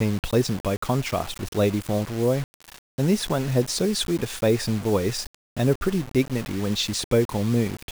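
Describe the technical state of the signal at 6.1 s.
At 6.1 s the speech is grainy and rough. The distortion rides on the voice and shifts with it. Quieter stretches turn gritty, and the softest parts sputter or drop out. This runs through the whole clip, not just this moment. The likely cause is low bit depth without dither. The samples were rounded to very few levels, which fits a 5-bit signal. The error tracks the signal, sitting only about 20 dB below it.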